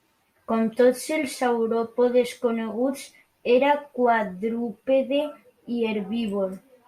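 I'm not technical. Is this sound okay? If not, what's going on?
Yes, nothing in this recording stood out as a problem when listening to it.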